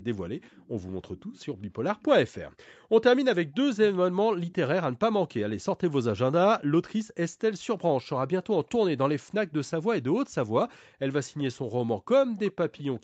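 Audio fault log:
0.41–1.45 s, 1.98–2.03 s, 2.65–2.73 s, 4.51–4.55 s and 12.02 s to the end, echo leak: the far end's echo canceller likely let loudspeaker pickup through, so a faint speech copy trails 382 ms behind, about 30 to 35 dB down.
2.78–2.9 s, background gated by the echo canceller: the canceller clamped the microphone while its loudspeaker played, so the room sound drops by up to about 40 dB for roughly a tenth of a second.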